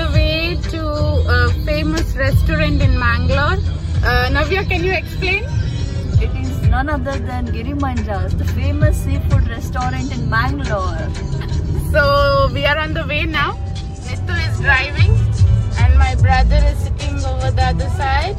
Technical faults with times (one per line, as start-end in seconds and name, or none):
13.26-18.39 periodic clock jitter